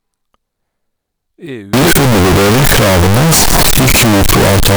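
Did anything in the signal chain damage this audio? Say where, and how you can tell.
Yes. Sample-format conversion likely mixed up signed and unsigned 16-bit samples from 1.73 s on, flipping the top bit. Zero crossings jump full-range, so the speech becomes harsh, uniformly loud distortion.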